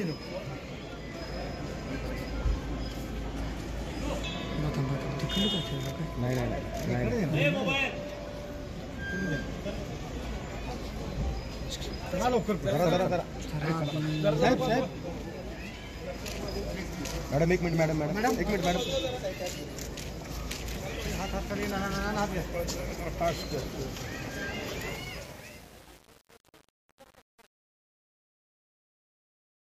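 The audio fades out over its last few seconds, from around 25 s to 29.7 s. Truncation distortion on the fade is heard from 24.88 s to 29.71 s. The quiet tail turns gritty. This fits a fade stage keeping about 7 bits without dither.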